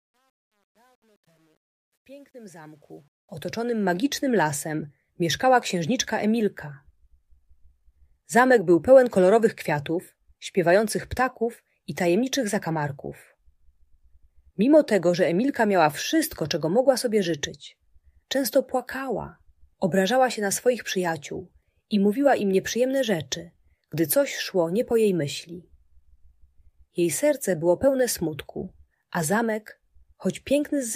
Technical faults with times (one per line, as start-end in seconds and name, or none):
0.00-3.99 truncation distortion on a fade